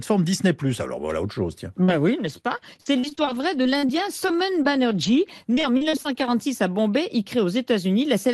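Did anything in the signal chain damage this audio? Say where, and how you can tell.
Yes. Short concealed packet loss on the network side at 1.83–1.90 s, just after "voilà autre chose tiens": the decoder stretched the preceding sound for about 44 ms, leaving a brief smear.

Lost packet rebuilt from error correction at 1.88–1.90 s: about 20 ms came from Opus's low-bitrate backup copy, so that sliver sounds rougher and noisier but has no gap.

Repeated packet loss (robotic sound) from 2.26 to 6.33 s: sixteen dropouts, the longest 48 ms, are each patched by continuing the last sound, giving a choppy texture with pieces missing.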